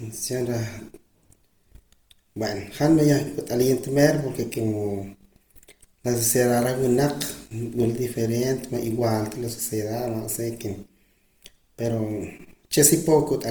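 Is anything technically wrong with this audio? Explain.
Yes, there's Opus compression damage running through the whole speech clip. It sounds rough and grainy, with a noisy texture where cleaner tones should be. That's likely the CELT music mode running short of bits, filling bands with folded or noise content rather than leaving holes. The damage fits a low rate of around 24 kbps, though the bandwidth stays full, reaching about 20.3 kHz.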